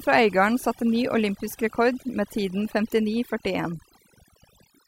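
Overdone noise removal runs from start to finish: the noise reduction was set too hard, cutting individual frequency bands down or out wherever they sat near its noise estimate and taking quieter voice detail with them. The background drops and is speckled with twinkling artefacts.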